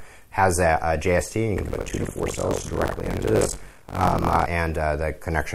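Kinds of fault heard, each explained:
Buffer tearing: from 1.56 to 4.47 s the program writing the ring buffer and the hardware reading it have slipped out of step, so each period joins fresh audio to audio from one lap earlier, with roughly half of it about 70 ms stale. The hard joins produce a rattling 46.9 Hz buzz, which fits a 1024-sample buffer. A spectrogram shows evenly spaced vertical click lines at that rate, and the waveform shows abrupt discontinuities where segments meet.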